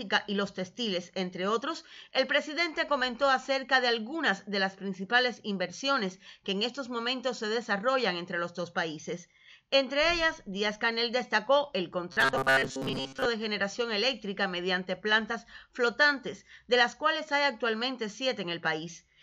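From 12.12 to 13.25 s the sound turns into a rigid, metallic buzz pitched at 134 Hz: robotic sound from repeated short buffers, likely caused by starved input forcing playback to loop the last 7.5 ms fragment, replacing most of the real audio.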